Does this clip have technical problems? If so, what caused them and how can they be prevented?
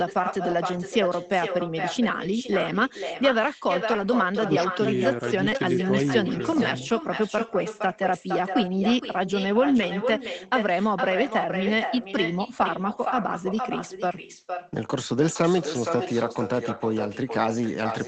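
Yes. There are two problems: an echo that runs through the whole clip, and several short stretches rebuilt after lost packets.

Echo with no canceller: the whole clip is shadowed by a quieter, thinner repeat of the speech, about 7 dB down and arriving roughly half a second later. The far end played the call through a loudspeaker, its microphone picked it up, and nothing subtracted it before sending it back. Room reverberation smears sound continuously within tens of milliseconds. This is instead a distinct, delayed second copy with a clear gap after the original. To prevent it, enable acoustic echo cancellation on the far-end device, or have that side use a headset.

Lost packet rebuilt from error correction: brief rough, noisier patches appear at 0.51–0.53 s, 2.25–2.27 s, 3.93–4.07 s, 5.41–5.59 s and 9.77–9.83 s, lasting 20, 20, 80, 100 and 40 ms. Packets were lost, but the following packets carried low-bitrate copies of them through Opus in-band forward error correction. 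The decoder played those coarser copies instead of silence. Unlike plain loss concealment, there is no gap, buzzy stretched tone or fade. To prevent it, reduce packet loss on the network path, for example by using a wired connection and less congested links.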